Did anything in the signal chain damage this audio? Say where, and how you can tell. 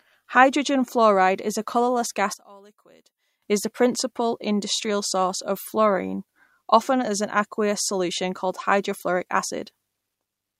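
Yes. Between 2.34 and 3.42 s, after "fluoride is a colourless" and before "is the principal industrial", the speech drops about 25 dB to a faint copy. That's one channel inverted, likely a polarity flip in the analogue wiring, so summing to mono cancels the shared centre content.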